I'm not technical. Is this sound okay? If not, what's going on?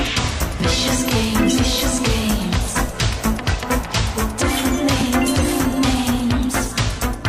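Yes, this sound is fine, and there's nothing here that needs fixing or worrying about.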